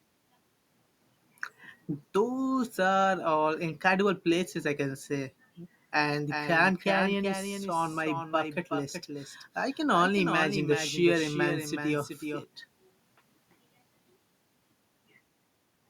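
From 6.30 s to 12.44 s the speech is joined by a doubled audio track. A second full-band copy trails roughly 0.4 s behind, about 5 dB quieter. It has no decay. It cuts in and out abruptly. A slower second capture is the likely cause.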